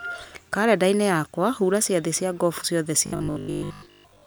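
A speech clip in which, from 3.06 s to the end, the sound becomes robotic, a rigid metallic buzz at 50 Hz that only roughly tracks the speech. This is likely robotic sound from repeated short buffers: most of the audio is replaced by loops of a 20 ms segment, which sets that fixed pitch.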